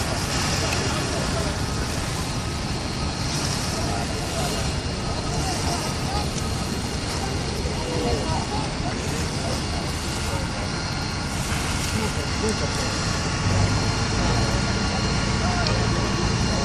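Nothing here stands out as a technical problem, so there's really nothing to flag in this audio.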